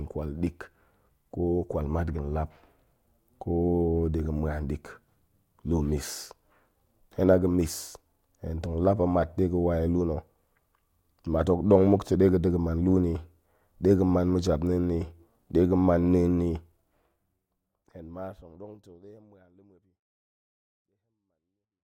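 Nothing stood out on listening to this speech recording, and the level eases away smoothly over the last five seconds or so, as an editor's fade-out would.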